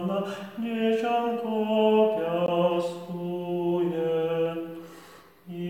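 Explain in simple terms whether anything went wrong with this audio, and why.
At 2.46 s there is a gap between stream segments: the sound stops dead for about 18 ms and then carries on. The stream arrives in pieces, and the timing labels on two neighbouring pieces left a tiny space between them, which the player filled with silence. Unlike a dropout, where a chunk of sound goes missing, nothing is lost here. The audio just pauses with sharp edges and resumes exactly where it left off.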